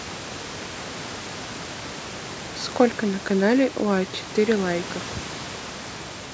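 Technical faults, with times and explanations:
No technical faults can be heard: the speech has passed through ordinary call microphone processing, with its normal bass roll-off and nothing above 8 kHz, and the room noise sits about 17 dB below the speech.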